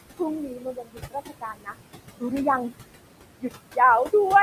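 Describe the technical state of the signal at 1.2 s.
At 1.2 s the signal sits inside a stretch of speech cut by the noise suppressor, running from 0.45 to 1.77 s. The suppressor classified parts of the speech as steady noise and attenuated them along with the background, reaching a deepest drop of about 22 dB. Around a second of speech in that span is affected, so soft consonants and word endings come across faint or swallowed.

Noise suppressor artifacts are also present here, as they are across the whole clip. The suppressor pulls noise-dominated bands down by about 20 dB frame by frame, so the room noise, sitting about 13 dB below the speech, drops away in pauses and returns beneath the speech.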